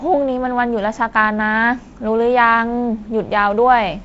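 No technical faults can be heard in the speech, which carries the character of G.722 wideband telephone coding, with nothing above about 7.7 kHz and a light coding hiss and graininess that fits its 48 kbit/s mode.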